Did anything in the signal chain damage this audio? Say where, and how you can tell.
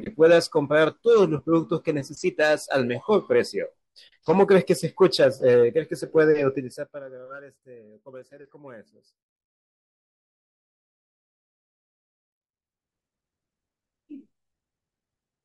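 No, nothing in this speech recording stood out on listening as a sign that any stage of the signal chain had damaged it.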